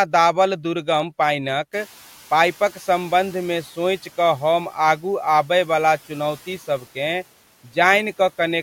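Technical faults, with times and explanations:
1.72–3.66 s, noise suppressor catching up: After the room noise jumps by about 22 dB around a second and a half in, between "दाबल दुर्गम पानिक" and "सोचि कऽ हम आगू", the suppressor's estimate of the background lags behind the new level. For roughly 1.94 s the louder noise passes with too little reduction, then gradually sinks by about 6 dB as the estimate catches up, the risen noise itself sitting about 26 dB below the speech.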